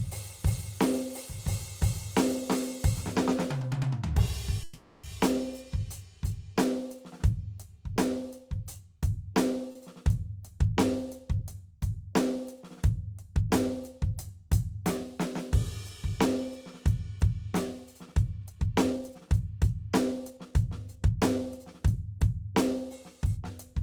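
From 4.63 to 5.06 s the music stops moving forward and its last sound is drawn out as a fading buzz for about 400 ms, never dropping to true silence. This is a call audio freeze, likely from packets held up in transit so the jitter buffer ran dry. The music then resumes exactly where it left off, so nothing is lost but a pause is inserted. On a spectrogram the harmonics flatten into smeared horizontal bands that dim; the waveform shows a repeating, shrinking pattern.

At 9.72 to 9.78 s a much shorter stall from a late packet occurs: one packet missed its slot, and the receiver stretched the current sound by about 30 ms until it arrived, then continued seamlessly. It is heard as a brief hold with a slight buzzy dip. On a spectrogram it appears as a thin vertical strip of frozen spectrum; the waveform shows a small dip in level.

From 18.07 to 21.66 s the music runs at about 112% speed while keeping its pitch. 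This is a jitter buffer speed-up: with too much audio queued, the receiver trimmed short pitch-period-length pieces again and again, removing around 0.4 s in total to cut the delay. The tempo feels rushed and uneven. A spectrogram shows note onsets crowded closer together at unchanged frequencies, and the waveform shows compressed rhythmic spacing.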